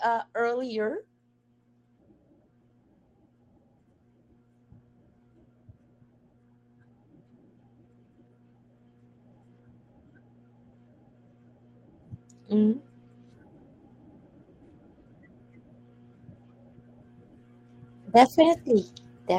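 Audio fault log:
No faults detected.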